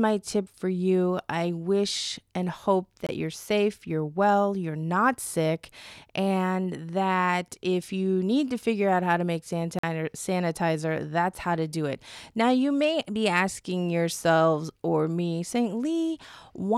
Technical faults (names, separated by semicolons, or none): block of digital silence